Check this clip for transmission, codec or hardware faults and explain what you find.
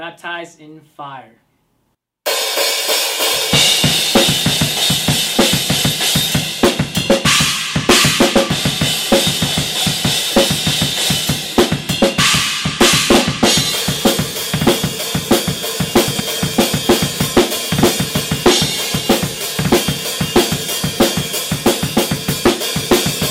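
One fault stands out: a brief jumbled moment from 16.08 to 16.2 s. The sound stutters out of sequence, with three hard joins. These are chunks out of order. A 40 ms chunk arrived late and plays two chunks after its proper place, so nothing is missing, only scrambled.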